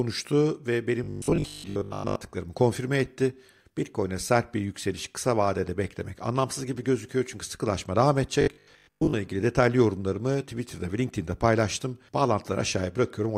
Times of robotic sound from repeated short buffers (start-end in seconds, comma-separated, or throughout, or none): 1.04-2.16, 8.41-9.13